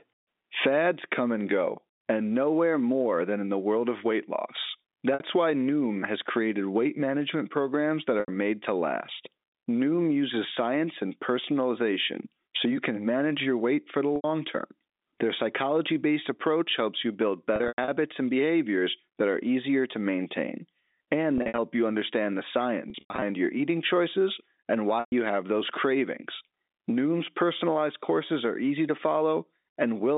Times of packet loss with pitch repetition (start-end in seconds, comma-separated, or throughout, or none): 5.14-5.20, 8.20-8.28, 14.16-14.24, 17.56-17.88, 21.38-21.58, 22.90-23.22, 25.00-25.12